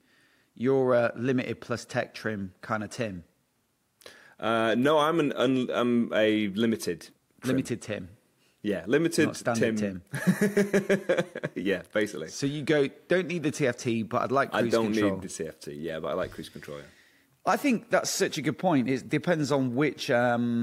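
From the start to about 13.85 s the top end sounds slightly dull, the highest frequencies gently softened. This is channel delay (comb filtering): one channel lags by roughly one sample, so the mono sum cancels near 20 kHz, dimming the treble.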